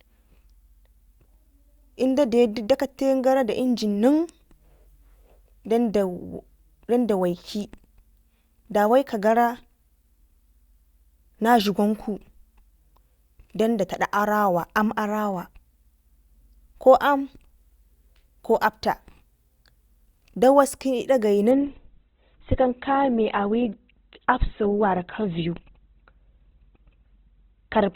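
An adaptive stream at a lower bitrate takes over from 21.51 s to the end of this speech clip. The quality drops suddenly but without a gap, as the player switches to a leaner encoding of the same stream. Nothing remains above 4.2 kHz, and codec artefacts thicken, which fits a step from around 64 kbit/s Opus down to about 12 kbit/s.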